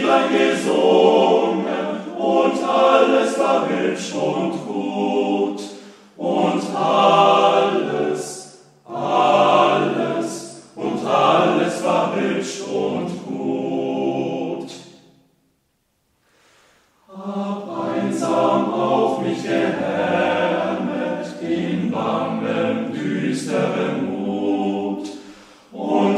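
No technical fault can be heard anywhere in the audio; the signal holds steady throughout with no dropouts, clicks, distortion or level problems.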